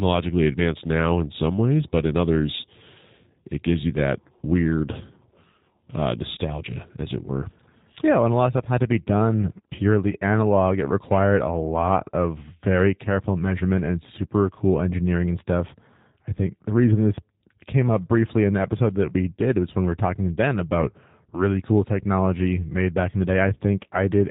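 Throughout the clip, the speech carries G.729 codec damage. The sound is rebuilt from a vocal tract filter, a pitch predictor and sparse pulses, which fits an 8 kbit/s stream. Nothing above 4 kHz survives. The speech sounds muffled, slightly rough and synthetic, and the damage is plainly audible.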